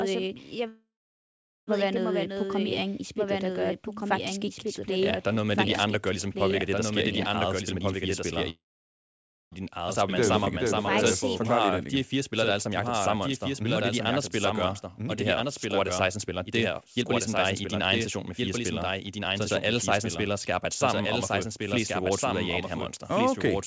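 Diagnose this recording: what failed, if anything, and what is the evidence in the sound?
Throughout the clip a second copy of the whole recording sits roughly 1.5 s behind the original and about 5 dB quieter. This is a doubled audio track, likely from a second capture path or an editing misalignment. Unlike a room echo, the copy is full-band, with no decay or added room colour.

From 0.68 to 1.70 s the sound holds a fading continuation and then goes silent for about 0.8 s before "være noget øh". From 8.50 to 9.55 s the same happens, with about 0.9 s of silence. These are call audio freezes at the network and jitter-buffer stage, likely from delayed packets. Speech resumes exactly where it stopped, so nothing is lost, which separates them from dropouts.

Between "i din eget spil" and "fire spillere", 7.74 to 7.98 s plays at 124% speed. From 9.70 to 23.29 s the audio runs at 106%, removing roughly 0.7 s in total. 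This is jitter buffer speed-up: pitch-period pieces are cut repeatedly to shed excess delay. Pitch stays unchanged, so it is not a sample-rate error. It simply sounds hurried.

At 10.45 to 10.49 s playback skips ahead. Roughly 1 s of audio is gone, bridged by only about 11 ms of fill, so the two sides join almost directly. This is audio dropped either on the way or by the jitter buffer when it overflowed. Unlike a freeze, material is missing rather than delayed. The G.722 call path, with nothing above 8 kHz, carries all of this.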